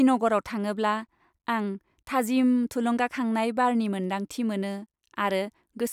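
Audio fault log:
Nothing to log here; this bit of speech comes across without any audible fault.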